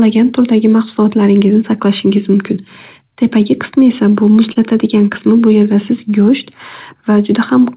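At 4.53 s to 4.57 s, a short stall from a late packet holds one sound about 29 ms too long with a faint buzz or dip, then continues without a gap, unlike a dropout.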